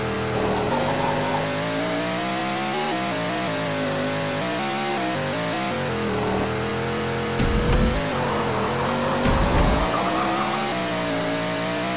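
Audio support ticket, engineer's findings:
No faults found; the call path holds steady, with the band ending at 4 kHz as expected for a 64 kbps G.711 A-law link.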